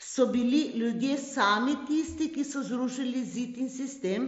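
A speech recording with no technical faults. It comes through a Bluetooth mSBC headset codec, so nothing is heard above about 7.7 kHz, and there is a light graininess typical of that wideband headset link.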